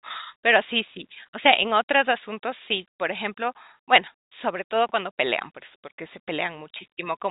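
At 4.89 s, packet loss with the last packet repeated causes a brief glitch lasting until 4.92 s. About 30 ms of the speech never arrived, which fits a single lost 30 ms packet. The receiver filled the gap by replaying the packet before it. The result is a small blip, heard through the narrow 4 kHz telephone band of G.711 coding.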